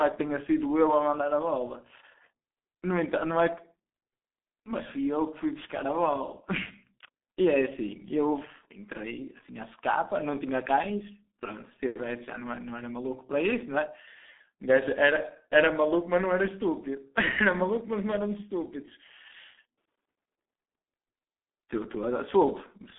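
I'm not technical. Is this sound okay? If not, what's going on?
No. From start to finish the speech sounds muffled and hoarse, like an old internet phone call, and consonants blur together. This comes from the G.723.1 codec, an early internet-telephony format that squeezes speech very hard. It keeps only a narrow phone-line range, roughly 250 Hz to 3.6 kHz, with nothing above 3.8 kHz, and it rebuilds the voice from a coarse, slowly updated model. Here that damage is heavy.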